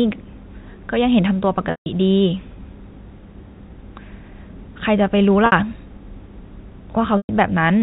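Packet loss with pitch repetition occurs at 1.71–1.86 s, 5.46–5.52 s and 7.17–7.29 s. The last pitch period is looped, giving a held, buzzy tone that fades toward silence in the longer gaps. Spectrograms show frozen, flat harmonics, and waveforms show identical, decaying cycles.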